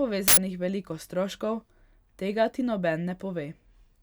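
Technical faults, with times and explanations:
0.28 to 0.37 s, uninitialised buffer: a 93 ms block, which fits 4096 samples, played leftover memory instead of audio, causing a loud burst of digital noise just before "veliko stroškov". The waveform shows a dense, hard-edged slab, and the spectrogram shows a broadband vertical band.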